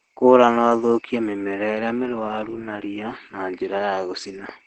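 From start to finish, the speech carries Opus voice compression damage. The spectrum stops at about 8.3 kHz, which fits wideband operation, leaving the voice dull and lacking sibilant air. The coder appears to be running in its SILK linear-prediction mode at a low rate, consistent with roughly 12 kbps. At that rate the excitation is quantised coarsely, so the damage is plainly audible: a muffled, hoarse quality with a faint robotic edge.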